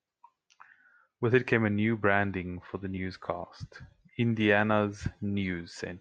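At 2.97 s, just after "new branding for the", the speech jumps forward. This is a case of compressed frames skipped. A single frame of the coded audio never reached the output. Either it was missing or the decoder rejected it as damaged. About 20 ms of sound is lost, which fits one 20 ms frame. The speech lurches ahead at that point.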